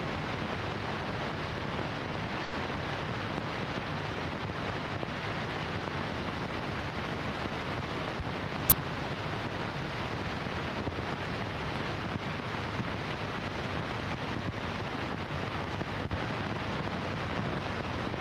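At 2.43 to 2.54 s the sound holds on a single moment for about 90 ms, then carries on with nothing skipped. This is a short stall from a late packet: the jitter buffer ran dry, so the receiver stretched the last audio to fill the 90 ms wait. Everything afterwards plays about 90 ms later.

From 8.70 to 8.72 s a sudden, loud burst of harsh digital noise cuts in for about 21 ms. This is an uninitialised buffer: a block was played before any audio was written into it, so leftover memory came out as samples. Its length fits a 1024-sample block.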